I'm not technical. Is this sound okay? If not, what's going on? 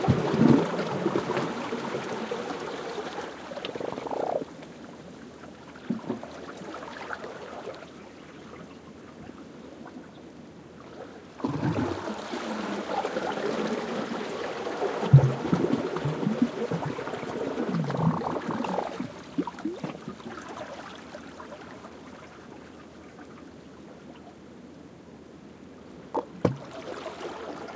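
Yes, this one's fine; it just has that slightly muffled phone-call character, because the call's microphone processing trims off the deepest bass and nothing above about 8 kHz gets through, which is normal for a call.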